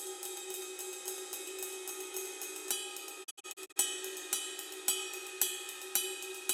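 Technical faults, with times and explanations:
0.00–2.72 s, doubled audio track: A second copy of the same audio is mixed in, most likely captured again through a slower path or left out of step by an edit. The copy trails the original by roughly 300 ms and sits about 5 dB lower. Because it is a clean, full-band copy with no decay or room colour, it sounds like a flat, distinct repeat rather than a reverberant echo. It is already present when the clip begins and stops abruptly at 2.72 s.
3.23–3.78 s, digital broadcast dropout: The receiver stopped getting usable digital frames, either because the signal was lost or because frames failed their checksum, so it muted until good frames returned. Across about half a second, the sound drops out in several short holes, each faded to silence over about 20 ms. The longest hole is 64 ms, and about 224 ms of audio is missing in total, which fits a handful of lost frames of roughly 32 ms each. 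Nothing sent during those holes can be recovered.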